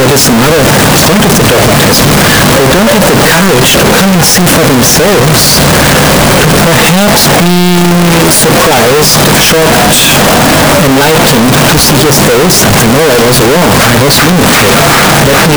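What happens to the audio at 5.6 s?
At 5.6 s the audio shows the same float read as integer fault that runs through the whole clip. The waveform is nearly square, pinned at an almost constant high level whatever the original loudness. On a spectrogram, energy smears densely across the full band. It sounds very loud and harsh, with background noise as loud as everything else. The likely cause is 32-bit float samples read as 32-bit integers, so sign and exponent bits dominate each value.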